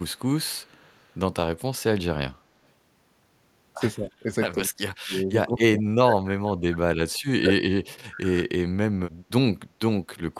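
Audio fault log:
0.16–0.23 s and 0.64–1.12 s, echo leak. A faint delayed copy of the speech trails the talker, lagging by 185 ms. It sits very low, roughly 40 dB under the speech, so it reads as a ghostly doubling rather than a clear repeat. The likely cause is a far side on loudspeaker whose echo canceller missed part of what its microphone heard. That leftover was sent back down the line.
2.28–2.43 s, background gated by the echo canceller. The room sound dips suddenly by about 16 dB for roughly 150 ms, then comes back. The floor noise seems to switch off and on. This happens while the loudspeaker is playing: the echo canceller pulls the microphone down hard to keep echo out. It takes the background with it until it lets go.
3.96–4.29 s, 4.53–4.84 s, 5.0–6.8 s and 7.02–8.52 s, speech suppressed in double talk. The talker's voice sinks and breaks up in pieces. The first dip is mild, around 15 dB. 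Later ones go far deeper, about 30 to 35 dB, and the last two stretches last over a second each. Both sides were likely talking at once. The canceller could not tell the talker from echo, so it cut both.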